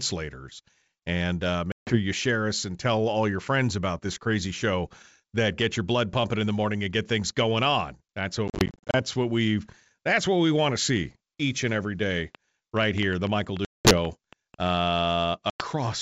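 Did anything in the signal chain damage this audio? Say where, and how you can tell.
Yes, the network stage did. There's packet loss on the ADPCM call, heard as hard-edged silent holes at 1.72 to 1.98 s, 8.48 to 9.02 s (about 270 ms lost in short scattered gaps, none over 40 ms), 13.65 to 13.97 s and 15.50 to 15.64 s. After each hole the decoder's predictor and step size no longer match the sender's, so the audio comes back a bit distorted before settling.

There's also a train of clicks from 12.35 to 14.68 s: around fifteen near-identical pops at about 5.6 per second, unevenly spaced, peaking roughly 10 dB over the signal and audible in the pauses too. It's likely interference or a struggling interface injecting pulses. The G.722 wideband coding underneath is clear up to 7 kHz.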